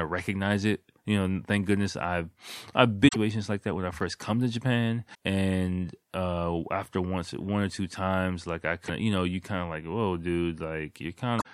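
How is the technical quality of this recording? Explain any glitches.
The recording has four short faults from damaged data in a compressed stream: 3.05–3.16 s, after "thank goodness I've I've"; 5.11–5.15 s, before "and uh after once"; 8.84–8.90 s, between "two times like I" and "of you know you"; and 11.38–11.46 s. At each point the corrupted bytes make the decoder misread frames and lose sync while it searches for the next valid header. The speech breaks into a brief chirp or squawk, 40 to 120 ms long.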